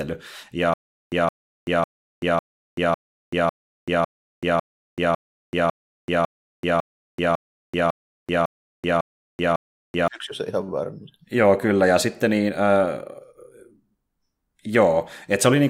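From 0.74 s to 10.08 s the speech breaks into a stutter with silent gaps: a 167 ms fragment plays, then about 384 ms of digital silence follows, and the same fragment returns every 551 ms, 17 times in all. This is likely a stalled player or stream that replays its last buffered fragment at each retry and then runs dry. Whatever speech belonged in that span never arrives.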